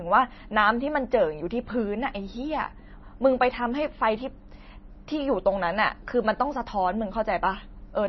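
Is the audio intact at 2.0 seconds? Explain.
No, MP3 compression damage runs throughout, including 2.0 s: speech sounds watery and swirly with nothing above 5.9 kHz, likely from a starved encoder around 24 kbps.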